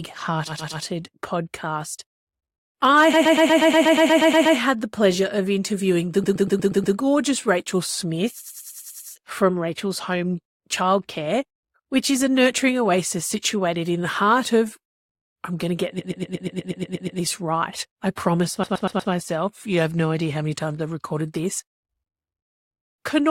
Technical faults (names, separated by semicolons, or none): repeated frames